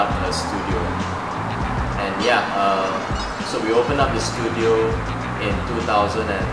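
No technical faults can be heard anywhere in the audio.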